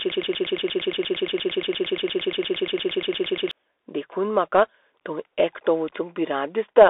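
Broken-record loop, from the very start to 3.51 s: the clip opens already caught in it. A fragment about 0.12 s long repeats exactly, back to back, 29 times, giving a rapid stuttering buzz with no forward progress. The likely cause is a player, encoder or stream that stalled and kept resending the last fragment it held. Whatever should have played during those three and a half seconds is gone.

Bluetooth CVSD headset codec, throughout the whole clip: the speech sits in a narrow telephone-like band of roughly 300 Hz to 3.6 kHz, with nothing above 3.8 kHz. The codec sends one bit per sample, up or down, with an adapting step size, which fits a 64 kbps headset link. The damage is plainly audible: loud bright sounds outrun the step and distort, s sounds turn scratchy, and a granular hiss lies beneath the speech.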